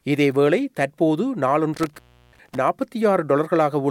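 At 1.74 s an intermittent contact sets in and lasts until about 2.57 s. A loose connection in the signal path breaks, and the sound drops out for roughly 344 ms. Crackle marks the break and the reconnection, and faint hiss fills the gap while the line is open.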